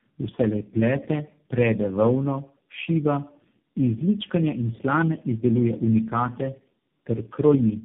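Tandem speech coding runs through the whole clip. The speech sounds as though it was decoded and re-encoded by about four low-rate speech coders in turn, each working on the last one's damage. It is rough, muffled and warbly, with nothing above 3.6 kHz.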